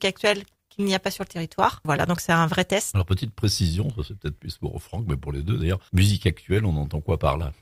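Clock drift between sender and receiver runs through the whole clip. The sending side's audio clock is running faster than the receiving side's, by roughly five percent. Because samples arrive quicker than they are played out, the jitter buffer keeps filling, and the receiver has to discard material to keep its delay in check. On a waveform this shows as small discontinuities where the envelope jumps at the joins. A spectrogram shows faint vertical seams where harmonic or noise texture is briefly broken.

Repeated timing corrections begin at about 0.37 s and continue until about 7.35 s. Since the sender's stream effectively plays at 105 percent speed relative to the receiver, each correction cuts out a short piece of audio, always in that same direction. The cuts are spaced unevenly, and they are heard, if at all, as small hiccups or an unsteady tempo in the sound. In the waveform, each cut appears as a place where one cycle pattern abruptly gives way to another. 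On a spectrogram, a narrow time slice seems to be missing, and the edges of events shift by irregular amounts.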